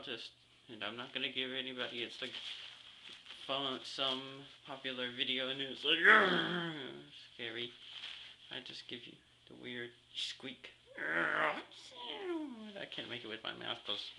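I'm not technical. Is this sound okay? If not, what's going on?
Yes, this sound is okay, and nothing is going wrong with it.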